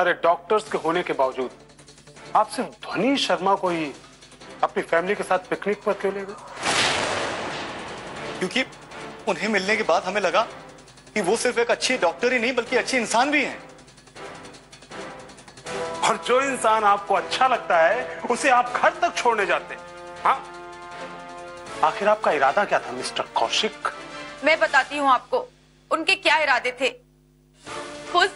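No technical faults can be heard anywhere in this recording.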